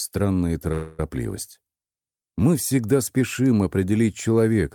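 Packets likely stalled and drained the jitter buffer, causing a call audio freeze from 0.72 to 1.00 s: a fading buzz fills about 264 ms, then the sound resumes intact, only delayed.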